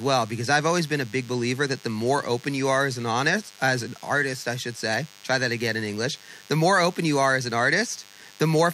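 DECT cordless phone buzz runs through the whole of this speech clip, a thin, steady 100 Hz buzz rich in harmonics sitting roughly 25 dB below the speech. A nearby DECT handset or base transmits a radio burst every 10 ms, and the audio circuitry rectifies those bursts into sound.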